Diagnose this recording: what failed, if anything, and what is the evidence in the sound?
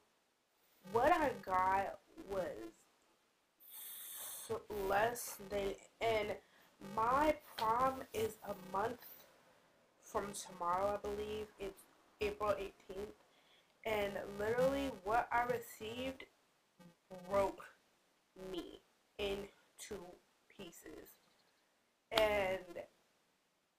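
The failure sits in block-based processing at the driver or buffer stage: a filter restarted on every block. A steady buzz near 345 Hz runs through the whole recording and tracks the sound's level. That rate fits a 128-sample block. Each block opens with a small transient.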